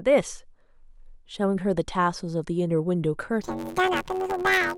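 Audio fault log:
3.41–4.77 s planar audio read as interleaved: 10.88 ms blocks of left-then-right samples are read as alternating pairs, giving a robotic buzz at 91.9 Hz without an obvious octave shift.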